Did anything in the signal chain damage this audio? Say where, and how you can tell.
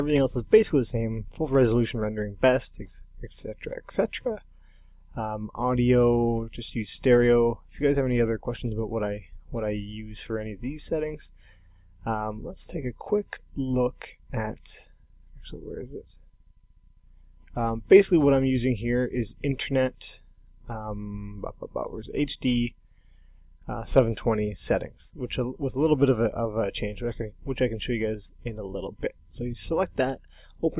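No, nothing in the chain audibly damaged it.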